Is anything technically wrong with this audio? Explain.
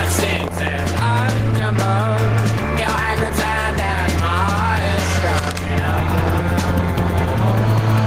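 Yes. Gain pumping runs through the whole clip. The likely cause is input gain set far too high for the microphone, with a fast limiter or compressor clamping down each time a loud sound arrives and releasing in the gaps. The level swings by around 5 dB, so the dynamics sound flattened and squashed.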